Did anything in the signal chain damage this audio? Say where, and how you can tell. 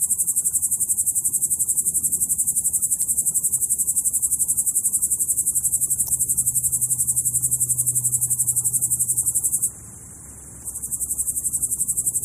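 Yes, at the codec stage: damaged data in a compressed stream. Short blips break into the sound at 3.02 to 3.05 s and 6.05 to 6.09 s. Corrupted bytes there made the decoder misread frames and lose sync until it found the next frame header.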